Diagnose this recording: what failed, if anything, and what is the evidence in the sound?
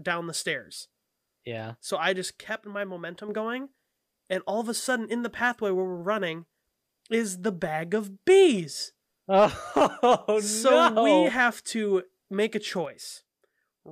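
The speech level falls abruptly by about 6 dB from 2.40 to 3.29 s, then snaps back. It falls again at 12.85 s and stays down to the end. The likely cause is one channel dropping out in the analogue wiring, such as a loose connector. After the mono sum, only the surviving channel's half remains.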